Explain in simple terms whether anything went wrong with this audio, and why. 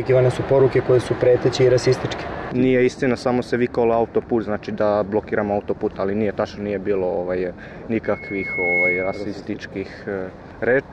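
Loudspeaker feedback squeal appears from 8.04 to 9.33 seconds: a single high tone near 2.2 kHz swells up over under a second until it sits above the rest of the sound. A microphone was picking up its own loudspeaker, and that pitch kept looping back and growing louder.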